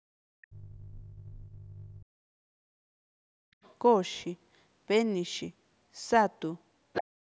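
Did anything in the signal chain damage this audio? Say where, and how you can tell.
Yes. All three faults come from the call's echo canceller.

Background gated by the echo canceller: the room sound briefly drops out, by about 40 dB at 0.0–0.09 s and about 32 dB at 3.54–3.61 s. The canceller clamped the microphone while the loudspeaker played.

Speech suppressed in double talk: the speech dips by roughly 40 dB in pieces from 0.37 to 3.26 s and again from 7.04 s to the end. This is likely the canceller mistaking speech for echo while both sides talked.

Other side's voice leaking through: a second voice is heard at 1.0–2.01 s at roughly 25 dB below the speech, at 3.63–3.75 s about 35 dB down, and at 6.93–7.04 s only about 5 dB down. This is likely residual echo the canceller left behind.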